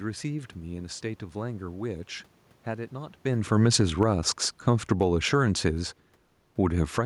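From 3.25 s to 5.91 s the speech sinks steadily by about 6 dB, and the room noise in the background drops right along with it, a telltale sign of automatic gain falling. Shortly after the talker shifts position around 3 s, the gain control judged the input too loud, or its background noise too strong, and eased its gain down. It happens again, faster, from 6.71 s to 7.01 s, pulling the level down by about 7 dB.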